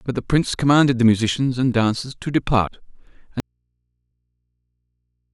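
At 2.67 s, compressed frames are skipped: the speech jumps ahead roughly 70 ms, consistent with two missing 32 ms frames. From 3.4 s to the end, an audio dropout to a faint residue cuts the speech abruptly, leaving only mains hum about 55 dB down, likely from a lost signal feeding a still-live input.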